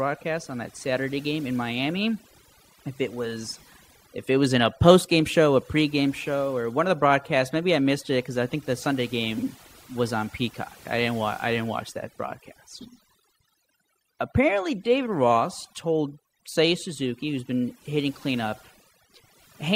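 Overdone noise removal runs from start to finish: a noise reduction stage set far too aggressively pulls individual frequency bands down to nothing wherever they sit close to its noise estimate, taking quieter parts of the speech with them. Pauses fall to near silence flecked with twinkling artefacts.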